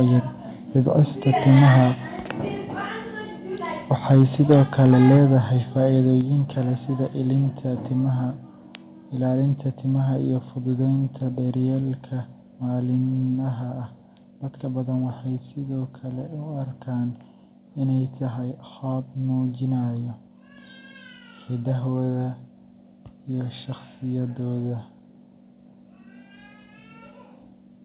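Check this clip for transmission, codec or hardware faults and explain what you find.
Two faults are present: clipped peaks early in the speech, then a series of sudden level drops, all heard through a narrowband call path with nothing above 4 kHz, which fits G.711 mu-law at 64 kbps.

Microphone overload at 1.48–1.83 s, 4.1–4.23 s and 4.5–5.17 s is likely caused by input gain pushing peaks about 3 to 4 dB past the converter's ceiling. The flattened tops give the loudest syllables a harsh, crackly edge.

Microphone volume stepped down at 5.17, 6.21, 11.79 (just after "iyo fududeynta") and 13.35 s, likely the call software reacting to the clipping by cutting input gain. Level falls abruptly by about 2, 4, 1 and 2 dB.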